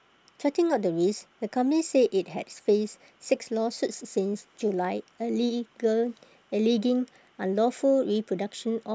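A speech recording carries clock slip clicks from 0.51 s to 8.85 s: faint ticks at a steady interval of roughly 0.7 s, about fifteen in all. The likely cause is two unsynchronised clocks drifting apart by around 100 ppm, so a single sample is dropped or repeated each time the error adds up to one sample. These tiny, evenly spaced ticks vanish in the pauses.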